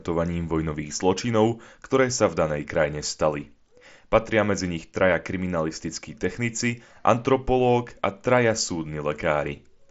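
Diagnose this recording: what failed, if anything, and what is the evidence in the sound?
Nothing stood out on listening to this speech recording, which carries the expected band limit of a Bluetooth mSBC headset link, with nothing above about 7.7 kHz.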